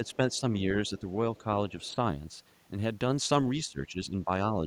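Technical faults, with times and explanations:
0.01–1.07 s and 3.66–4.30 s, speech suppressed in double talk: the speech dips in patches, gently at first and then more deeply, likely an echo canceller ducking the talker while both sides spoke.
0.06–0.38 s, 0.87–1.01 s and 1.69–1.95 s, other side's voice leaking through: a faint second voice, roughly 30 to 35 dB down, unlike the dips, likely from loudspeaker echo left in the microphone.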